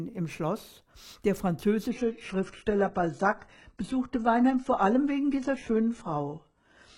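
At 1.91 s the adaptive stream switches to a lower bitrate for the rest of the clip, a sudden change with no gap that fits a drop from 96 kbit/s AAC to 12 kbit/s HE-AAC. Above 11.1 kHz the sound is gone, and codec artefacts increase.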